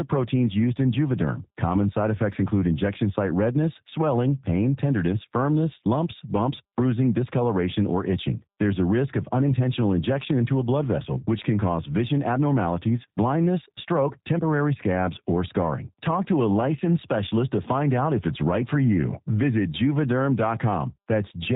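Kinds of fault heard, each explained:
G.729 codec: the speech sounds plainly rough and synthetic throughout, as a heavily coded low-rate voice path does; a spectrogram shows nothing above 4 kHz.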